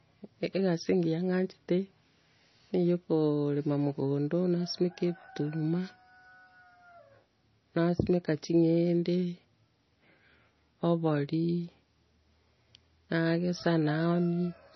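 From start to finish, the speech carries heavy damage of the kind MP3 compression leaves. Nothing sounds above 6 kHz, so the top end is cut cleanly away. Weak frequency detail drops in and out from frame to frame. That gives a watery, swirling quality, and s sounds turn metallic and chirpy. Consonant attacks smear. The likely cause is an MP3 encoder starved of bits, at a rate near 24 kbps.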